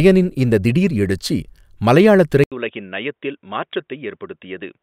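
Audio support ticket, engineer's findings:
Speech turns dull and boxy from 2.44 s to the end: nothing above 3.8 kHz, roughly 10 dB quieter, faint new noise floor. 80 ms silence at the switch. Likely input switched to a poorer device; gap, level and noise changing together point to it rather than a codec bandwidth drop.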